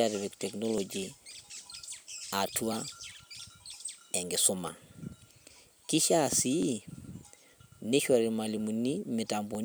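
Clock drift buffer slips run from 0.78 s to 9.55 s: a click recurs about every 0.97 s through the speech, roughly ten in all. The likely cause is two devices on unsynchronised clocks, disagreeing by something like 700 ppm, so the buffer between them periodically drops or repeats a few dozen samples.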